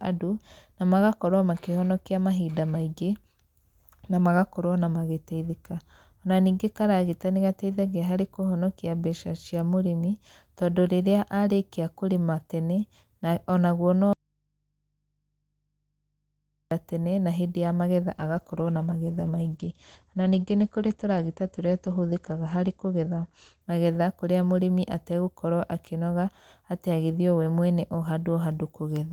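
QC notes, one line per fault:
14.13–16.71 s, audio dropout to a faint residue: speech cuts abruptly for 2.58 s, leaving only mains hum far below signal, likely a lost input with the path still live.
18.17–24.99 s, call bitrate drop: encoder rate falls from 32 to 12 kbps, bandwidth narrows from 20 kHz to 8 kHz, so speech turns muffled and coarse, lowest for 4 s.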